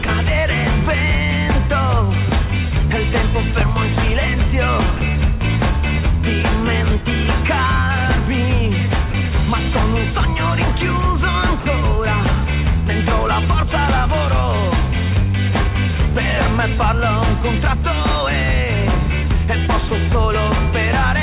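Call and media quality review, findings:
Sound dropped by the voice detector: sender-side VAD likely misclassified low-level sound as background and stopped transmitting; receiver filled with comfort noise. Brief gaps of steady noise at 0.05, 4.97, 9.11 and 19.88 s (30 ms each) and 11.6 s (60 ms).

Loud pop: single voltage transient, likely from a connector, switch or driver glitch, added to the signal. Sharp pop about 10 dB above the sound at 3.61–3.63 s, with the sound continuing underneath. The 4 kHz ceiling of the call path, consistent with 64 kbps G.711 mu-law, is heard around it.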